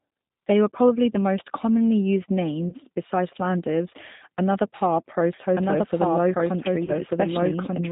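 Throughout the speech, the sound has the narrow, slightly rough and synthetic quality of G.729 codec coding, which fits an 8 kbit/s stream. Nothing above 4 kHz is present, and the voice is rebuilt from a vocal tract filter, a pitch predictor and sparse pulses, so the coding damage is plainly audible.

At 2.69 to 2.74 s and again at 6.85 to 6.90 s, VoIP packet loss concealed by the speech codec appears. About 30 ms of audio went missing each time, and the decoder filled the gap by extending its last pitch and filter with falling gain. The result is a brief stretched, fading smear, and the voice stays weak until the decoder recovers.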